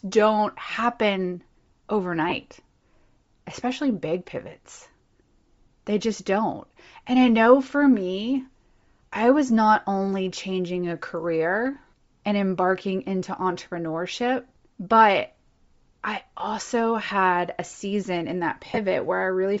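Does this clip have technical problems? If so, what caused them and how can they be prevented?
Yes. Throughout the speech the upper spectrum sounds hollowed out and refilled with hiss, giving consonants and vowels a breathy, grainy edge. This is likely Bluetooth LC3 compression at a low bitrate, around 32 kbps with 7.5 ms frames. On a spectrogram the high band appears as patchy, speckled noise instead of clean harmonic detail. Prevent it by raising the LE Audio bitrate or codec configuration, or by recording on the device rather than over the Bluetooth link.

Lost LE Audio frames cause two brief disruptions. At 2.29 to 2.32 s a gap of about 22.5 ms, which fits three 7.5 ms frames, becomes a noisy smear. Just after "a season in that", at 18.70 to 18.79 s, losses are scattered across about 75 ms. Each run is short, the longest roughly two frames. In both places the decoder repeats the last spectrum with randomised phase, so harmonics blur into broadband noise on a spectrogram. 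On the waveform the fine detail turns fuzzy. Prevent this by keeping the devices close, avoiding 2.4 GHz interference, and using a larger retransmission or latency setting.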